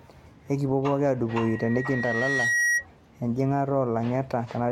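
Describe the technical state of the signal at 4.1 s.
At 4.1 s the speech signal is intact, with no audible fault at that moment.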